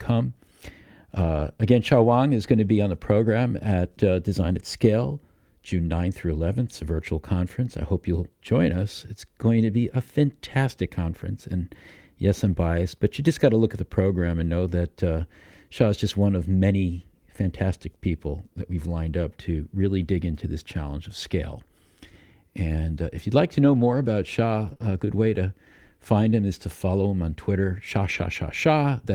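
Speech with packet loss. It has lost packets rebuilt from error correction at 1.15–1.41, 20.01–20.07 (after "lined up to really"), 23.63–24.09 (after "if you'd like to"), 24.65–24.71, 24.81–24.87 (before "good way to find") and 28.09–28.23 s. The decoder played low-bitrate copies carried in the next packets, so nothing drops out, but those stretches sound rougher and noisier. Two short concealed packet losses follow at 24.73–24.78 and 24.78–24.81 s. There, about 20 ms each was missing and filled by extending the previous sound, heard as a brief smear or wobble.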